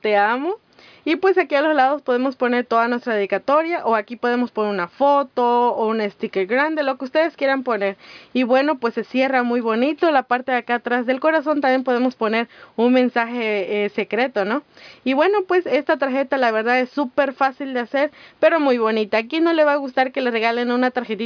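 No audible technical faults anywhere in this recording.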